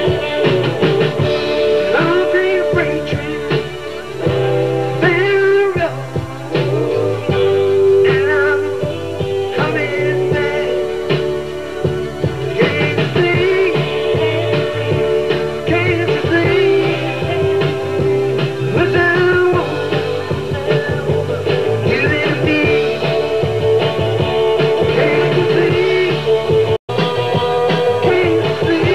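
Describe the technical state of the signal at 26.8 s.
At 26.8 s the output is in a playback stall: from 26.76 to 26.90 s the sound simply stops for about 120 ms in mid-flow, then resumes where it left off. The likely cause is the player running dry of buffered data or having its audio thread blocked. On a waveform this is a flat, near-silent gap with abrupt edges. On a spectrogram it is a clean vertical band of silence cutting through all frequencies.

Immediately afterwards, from 26.90 to 28.10 s, comes catch-up at higher speed. The player works through its backlog by resampling at 1.1 times normal speed, so everything runs slightly fast and sits about a semitone and a half sharp for 1.2 s before snapping back to normal rate and pitch. A spectrogram shows harmonics shifted upward by a constant ratio across that stretch, with a step down where normal speed returns.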